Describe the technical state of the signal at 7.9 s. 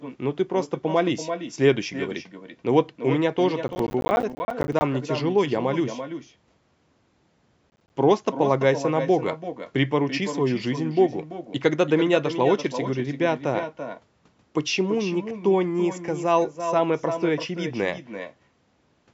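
At 7.9 s the signal is inside a burst of processor overload crackle from 7.7 to 7.96 s. About ten buffers, consistent with roughly 10 ms each, miss their deadlines and drop to silence, producing gritty, hard-edged tearing. Echo with no canceller is also present: the speech returns about 10 dB lower after roughly 300 ms, as a thin shadow.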